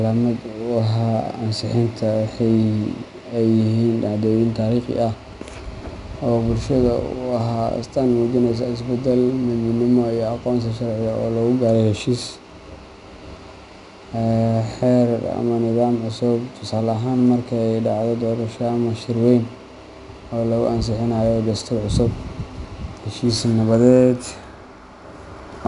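Throughout the speech, 4-bit ADPCM compression is plainly audible. Each sample is a coarse 4-bit step from a prediction, so a gritty hiss swells with every loud syllable rather than holding steady like low-bit-depth noise. Nothing passes 10.6 kHz, which fits a rate near 89 kbps.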